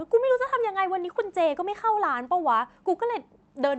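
No technical faults are audible anywhere in this speech.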